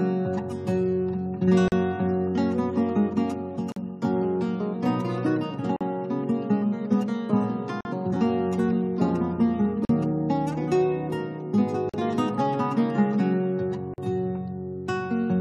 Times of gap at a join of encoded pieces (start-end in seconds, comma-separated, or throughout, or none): 1.68-1.72, 3.72-3.76, 5.76-5.81, 7.81-7.85, 9.85-9.89, 11.89-11.94, 13.94-13.98